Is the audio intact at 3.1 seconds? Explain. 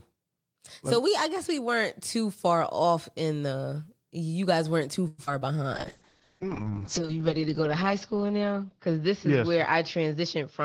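Yes, the speech at 3.1 seconds plays through intact, with no audible dropout, glitch or distortion at that moment.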